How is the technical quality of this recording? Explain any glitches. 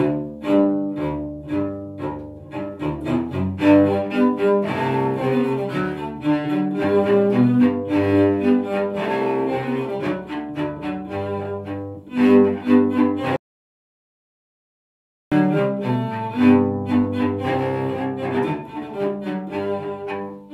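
The recording has one clear glitch, an audio dropout to silence from 13.36 to 15.32 s. The input was likely lost while writing continued, so the sound cuts off mid-flow into roughly two seconds of dead silence, with no room tone, then resumes abruptly.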